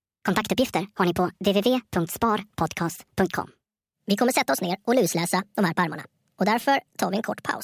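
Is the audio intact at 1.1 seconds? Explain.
No. A wrong sample rate fault runs through the whole clip, including 1.1 s. The speech plays about 1.45 times too fast and roughly 6.5 semitones high, which fits audio recorded at 22 kHz being played back at 32 kHz without conversion.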